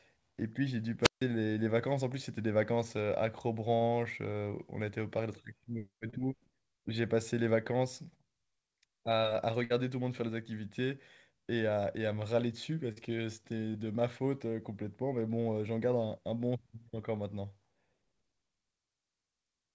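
At 1.02 s the wireless microphone squelch dropout occurs: the FM signal fades, a short rise of hiss precedes the receiver muting its output, leaving a hole of about 150 ms of near silence before the speech returns at 1.22 s.

Short concealed packet loss appears at 3.76, 6.10, 12.92 and 13.72 s. Each time 20 to 40 ms of audio never arrived, and the decoder bridged the gap by extending the preceding sound, heard as a brief smear or wobble.

At 9.64 to 9.72 s a burst of packet loss removes about 60 ms. The receiver held and faded the last sound over roughly 56 ms, giving a short buzz or decaying hiss, then resumed with that stretch missing.

The call path carries nothing above 8 kHz, consistent with a wideband codec such as G.722 at 64 kbps.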